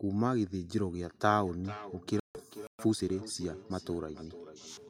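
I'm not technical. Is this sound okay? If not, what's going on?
No. From 1.3 seconds to the end there is feedback echo between two devices. The speech returns roughly every 0.4 seconds, thinner each time.

At 2.20 to 2.39 seconds the sound cuts out for about 150 ms. A Bluetooth dropout is the likely cause, with audio lost on the way.

At 2.67 seconds it stops again for 120 ms. This is likely a playback stall, where the player briefly ran out of audio.

From 2.79 to 3.27 seconds comes time-compressed catch-up. The speech runs 1.25 times faster at normal pitch.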